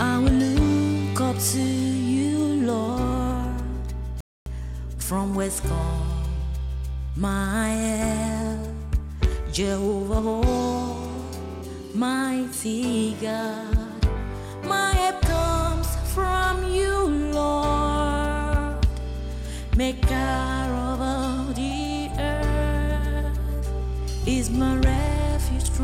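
The audio halts in a rebuffering stall from 4.21 to 4.46 s: playback drains its downloaded data, falls silent, then resumes exactly where it stopped, adding about 0.26 s without losing any material. A waveform shows a flat gap, and a spectrogram shows a clean vertical blank band. From 10.14 to 11.62 s a GSM phone buzz appears, a hard, raspy tone about 20 dB below the signal. A nearby 2G handset in an active call transmits in bursts 217 times a second, which the audio circuitry rectifies. A spectrogram shows evenly spaced horizontal lines at 217 Hz and its many harmonics, unrelated to the programme. From 11.64 to 13.93 s this gives way to GSM signalling bursts at roughly 30 dB below the signal, heard as even ticks with a longer buzz twice a second. The handset is still in the call, but with its user silent it sends only brief groups of bursts. These appear as clustered vertical striations that stack into short 217 Hz harmonic combs, and the waveform shows small periodic spiky bursts.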